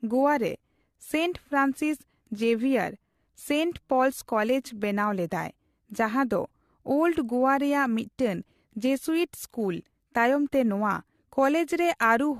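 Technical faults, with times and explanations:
Throughout: generation loss. The speech sounds swirly, smeared and hollow, and consonant attacks are blurred. Nothing is heard above 14.1 kHz. The damage is heavier than a single lossy pass would leave. The likely cause is repeated decoding and re-encoding with AAC-LC, about three times, at a rate that fits 64 kbit/s. Each pass quantises again on a shifted frame grid. The noise and spectral holes from each pass pile up, giving this washed, hollow character.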